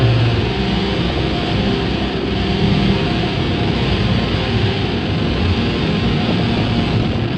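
From 0.97 to 1.68 s the sound breaks into DAB burbling: weak reception let bit errors slip past error correction into the MP2 data, so corrupted samples put short blips of noise in single sub-bands and corrupted scale factors throw individual sub-bands up or down in level for up to a frame. The result is burbling over the audio. It returns more densely from 6.24 to 7.18 s, pointing to a higher error rate, under one percent. A spectrogram shows scattered rectangular blocks in narrow bands, frame-long.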